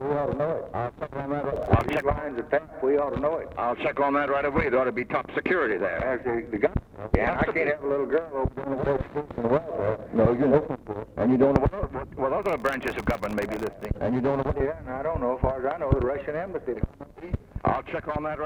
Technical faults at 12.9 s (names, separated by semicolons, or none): processor overload crackle